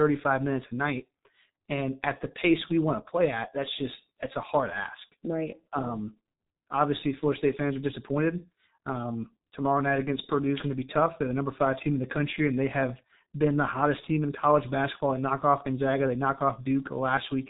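From start to finish the speech carries heavy G.723.1 codec damage. Nothing passes above 3.8 kHz, so it sounds muffled, and the slowly updated voice model smears consonants and adds a hoarse, rough texture, consistent with a bitrate near 6 kbit/s.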